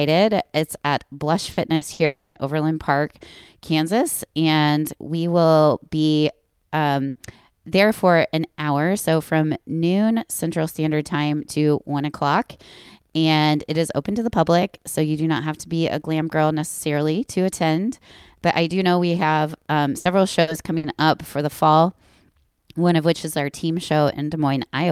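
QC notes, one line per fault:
1.51 to 2.02 s, burst of packet loss, three times (1.51, 1.75 and 1.93 s): a short run of speech packets failed to arrive in time each time. The receiver stretched the last sound for about 60 ms, a held buzz or hiss fading down, then resumed with roughly 60 ms of speech skipped.
2.05 to 2.38 s, long network dropout: the speech is replaced for about 300 ms by a continuation of the preceding sound that fades but never reaches silence. Speech then resumes with about 300 ms missing, likely because no packets arrived over that stretch.
7.09 s, burst of packet loss: packets lost or arriving too late left a gap of about 90 ms. The receiver prolonged the previous sound for about 60 ms as a decaying buzz or hiss, and the speech picks up again with roughly 60 ms gone.
19.99 to 20.86 s, burst of packet loss, three times (19.99, 20.41 and 20.77 s): the same pattern recurs as several consecutive packets go missing. 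Each gap is filled by about 60 ms of held, fading sound, and about 60 ms of speech is skipped before the audio continues.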